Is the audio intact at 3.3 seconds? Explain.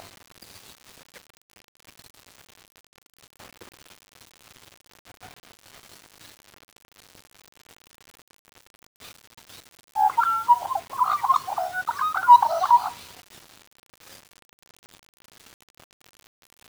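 No. At 3.3 seconds, as throughout the clip, the audio shows low bit depth without dither. The sound was likely quantized to about 7 bits by rounding with no dither added, so the error tracks the waveform instead of forming a steady noise floor. With the error only about 25 dB below the signal, quiet passages turn gritty and the quietest parts sputter or drop out, heard as grainy distortion that shifts with the sound.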